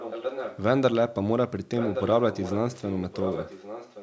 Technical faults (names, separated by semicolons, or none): echo leak